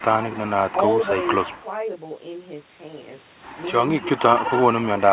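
Throughout, one channel runs about 20 ms behind the other before the two are summed to mono, causing channel delay (comb filtering). The speech sounds rough or slightly doubled. A spectrogram shows fixed horizontal notch stripes from around 30 Hz upward, repeating every 50 Hz or so, below the 4 kHz ceiling of the G.711 call path.

From 0.72 to 0.77 s the speech drops by roughly 10 dB for about 50 ms. This is likely speech suppressed in double talk, where the echo canceller turned down the near talker while both sides were speaking. The waveform shows a brief notch in the envelope.

From 1.59 to 1.66 s there is an echo leak, a faint copy of the speech arriving 143 ms late at about 35 dB below the direct sound. It is likely residual loudspeaker pickup that the echo canceller missed. On a spectrogram it appears as a weak, delayed repeat of the harmonic pattern.

From 4.0 s to the end of the clip the speech is pulled down by up to about 15 dB. 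This is likely another case of speech suppressed in double talk. The waveform envelope sags, and the spectrogram shows the speech energy fading for the rest of the clip.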